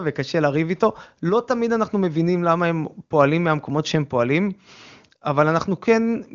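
Speech, with no technical faults to point to anywhere in the clip. It has passed through an AMR wideband (HD Voice) codec at a rate that points to 23.85 kbit/s, so it stays clear, with any coding damage faint at most and nothing present above 7.4 kHz.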